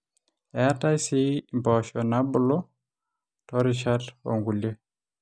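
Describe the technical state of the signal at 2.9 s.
Nothing is wrong with the signal at 2.9 s: the speech passes through that moment intact, with no fault audible there.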